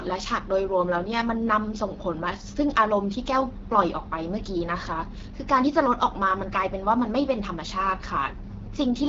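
From start to finish the speech carries the roughness of the AMR wideband (HD Voice) codec, and the damage is plainly audible. The coder models the voice as pulses driving a vocal tract filter. Here it has so few bits to work with that the sound turns raspy and grainy, which fits one of the two lowest modes, around 8.85 kbit/s. Nothing is present above 7.5 kHz, and the top band is only filled in with shaped noise.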